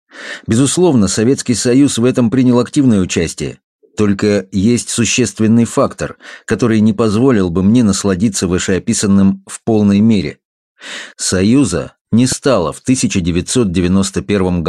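At 12.32 to 12.35 s there's a single loud pop, a sharp thump that peaks a few decibels above the sound, which keeps running underneath. It's likely a voltage spike from a plug, switch or static discharge that the downstream circuitry shaped into a short pulse.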